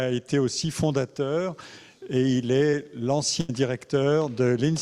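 At 2.71 to 2.75 s there is a short concealed packet loss. About 20 ms of audio never arrived in time to be decoded. The receiver covered the hole with roughly 13 ms of synthesized sound, extending what came just before. It then blended back into the real signal. The result is a brief smear or wobble.

At 3.41 to 3.51 s comes a burst of packet loss. About 80 ms of audio went missing in a row. The receiver extended the last sound for roughly 78 ms, fading it as the gap went on. That produces a held, decaying tail rather than the real content. Playback then picks up further along. The stretch in between is simply gone.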